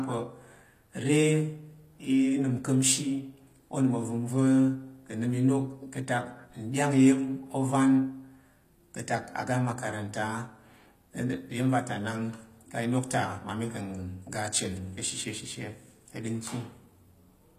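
HE-AAC compression damage runs through the whole of this speech clip, from start to finish. The upper spectrum sounds synthetic, with sibilants coming out gritty and lisping, and nothing at all above about 14.9 kHz. The likely cause is spectral band replication: the codec keeps only the lower band and rebuilds the treble by copying lower content upward under a coarse envelope, so harmonics fail to line up. The plainly audible damage fits a low bitrate around 24 kbps.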